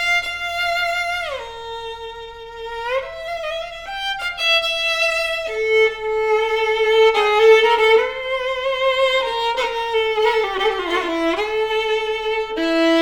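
No technical faults can be heard anywhere in the audio.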